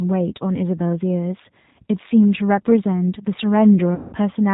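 It's speech, and the whole thing has that G.729 character: nothing above 4 kHz, plus a slightly rough, synthetic edge that fits an 8 kbit/s G.729A stream, where the voice is rebuilt from a vocal tract filter and pulses. The damage is plainly audible. Then from 3.95 to 4.16 s there's VoIP packet loss concealed by the speech codec. About 180 ms of audio is gone, which fits six lost packets. The decoder keeps extrapolating the last pitch and filter, so that stretch turns into a buzzy tone or coloured noise that fades.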